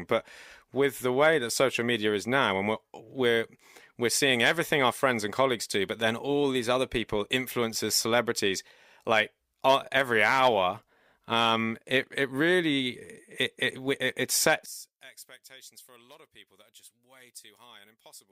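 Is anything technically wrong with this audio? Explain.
Yes. From 14.66 s onward, the speech drops by about 22 dB and turns faint. The likely cause is one channel inverted: summed to mono, the centred voice cancels, leaving only the faint difference between channels.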